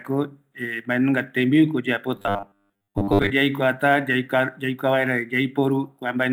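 From 2.16 to 3.31 s, new audio likely arrived too seldom, so the software kept repeating one short stretch and skipped most of the real audio. The result is robotic sound from repeated short buffers: a rigid, metallic 100 Hz buzz, fitting a 10 ms buffer.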